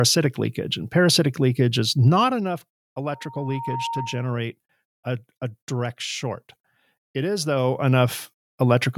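It's a speech clip with two problems. From 2.04 to 2.48 s, right after "and parasitic leakage is", there's zipper noise: the level drops by about 10 dB in 1 dB jumps, roughly 30 a second, so each unsmoothed gain step ticks audibly. The same zipping returns from 7.44 to 8.16 s as the level climbs back up by about 10 dB. In between, from 3.1 to 4.5 s, there's a loudspeaker feedback squeal: a 924 Hz tone swells over under a second to roughly the speech's own level, then cuts out just before "a a direct short". That's the mic picking up its own loudspeaker with loop gain above one at that frequency.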